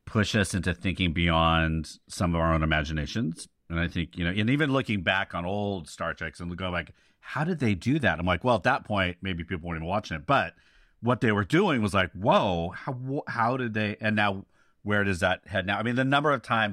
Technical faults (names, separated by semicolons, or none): none